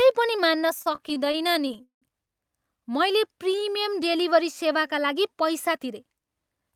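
From 0.79 to 2.04 s, just after "पनि मान्न", the speech drags and stutters through 18 brief stalls, the longest 179 ms, each filled by stretching the last sound. These are repeated stalls (stutter): packets arrived late, the jitter buffer kept running empty, and about a third of the span is concealment, with nothing actually lost.

Between 3.28 and 3.71 s, leading into "डेलिभरी सेवाका लागि", the speech slows to 89% of its pace at unchanged pitch, sounds drawn out, and gains 52 ms overall. This is a jitter buffer slow-down: with its reserve low, the receiver repeated single pitch periods to rebuild it.

From 5.69 to 6.73 s, after "डेलिभरी सेवाका लागि", the speech runs at 111% speed with the pitch held and sounds hurried. This is a jitter buffer speed-up: the buffer held more audio than its target, so the receiver trimmed short pitch-period pieces, around a tenth of a second in total, to reduce the delay.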